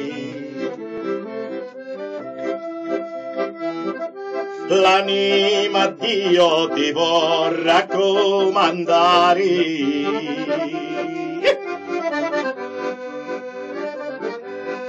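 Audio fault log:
0.98 s, repeated buffer: there's a quick click-buzz right here, because the playback device didn't get fresh audio in time and played its last chunk once more. That chunk is only about 11.6 ms long, which fits a 512-sample buffer, so the same tiny slice plays twice with a hard join at the seam. Since it's so short, you hear a snap rather than a stutter, and it doesn't seem to cost any audio.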